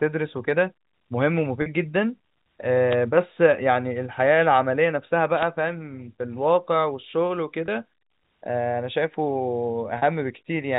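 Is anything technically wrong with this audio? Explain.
Yes. At 1.62 to 1.66 s, 7.66 to 7.68 s and 9.98 to 10.02 s the speech briefly turns into a held, slightly buzzy tone. This is packet loss with pitch repetition: gaps of 40 ms, 20 ms and 40 ms (consistent with two, one and two 20 ms packets) were bridged by repeating the last pitch period.

At 2.90 to 2.96 s and 5.35 to 5.46 s, short swishes of static are heard. These are wireless microphone noise hits: the FM radio signal faded as reflections cancelled, letting receiver noise rise over the speech.

Throughout, the sound is confined to the telephone band of G.711 coding, with nothing above 4 kHz.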